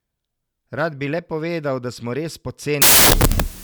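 From 2.82 s to the end, just after "smo res", a wrong sample width fault sets in: 16-bit samples are read as packed 24-bit values, splicing bytes from neighbouring samples. The result is loud noise with the speech buried underneath, running 1.5 times fast and pitched up.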